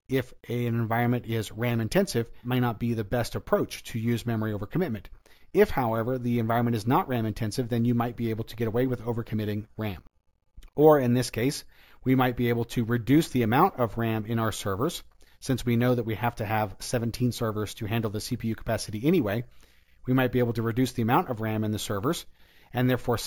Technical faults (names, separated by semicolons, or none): imaging from sample-and-hold upsampling